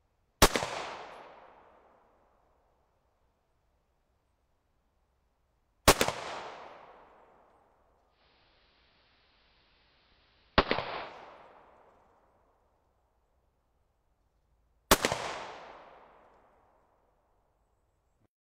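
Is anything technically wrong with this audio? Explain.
Yes. From 8.08 s to 11.17 s the audio shows digital radio blending to analogue: the receiver lost its digital stream and cross-faded, over about 170 ms, to the station's AM broadcast, then back. During that stretch a faint hiss sits well below the signal, while the level stays unchanged. The smooth fades in and out, and the hiss, set it apart from a simple filter or a dropout.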